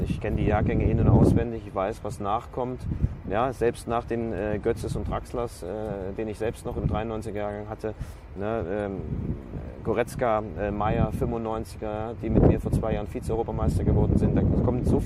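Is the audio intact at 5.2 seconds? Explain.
Yes, at 5.2 seconds the audio plays through cleanly, with no dropout, click, distortion or other fault at that point.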